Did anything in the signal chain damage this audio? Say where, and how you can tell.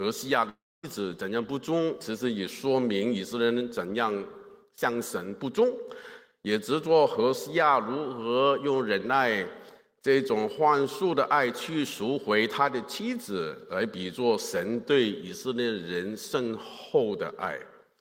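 Yes, network stage: from 0.49 to 0.85 s the sound decays into a fading buzz, then silence, and comes back missing 340 ms. That's likely a long network dropout.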